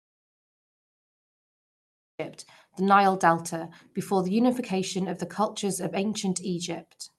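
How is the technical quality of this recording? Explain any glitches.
The recording opens with a hard gap: an audio dropout to silence runs from the very start to 2.19 s, before the speech appears abruptly. The speech that follows carries the coding texture of the call path, with content stopping near 12 kHz.

From 0 to 2.19 s there is digital silence, with no room tone at all, most likely because the input was lost or muted while the recorder kept writing zeros. On a waveform it is a flat line; a spectrogram shows a blank black block ending in a sharp vertical edge.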